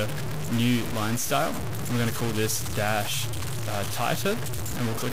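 Grainy distortion that shifts with the sound runs throughout, its noise nearly as loud as the signal. Likely low bit depth without dither, consistent with truncation to 4 bits.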